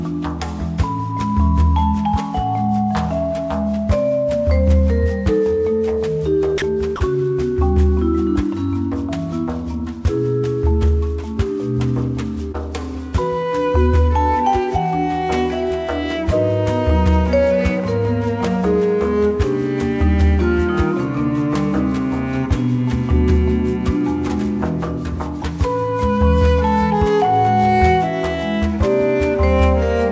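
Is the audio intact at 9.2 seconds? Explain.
Yes, the audio at 9.2 seconds is intact, carried through the WebRTC call path with its G.722 coding and nothing above 8 kHz, and no fault occurs there.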